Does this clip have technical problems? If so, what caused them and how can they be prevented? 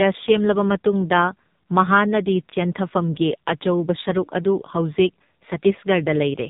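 Yes. Throughout the clip, the speech sounds muffled, buzzy and synthetic, with nothing above 3.8 kHz. That is the AMR narrowband mobile codec: the speech is rebuilt from a vocal-tract model driven by sparse pulses, and the heavy damage fits a low mode near 5.9 kbps. Using a wideband codec or a higher-bitrate mode for the call would prevent it.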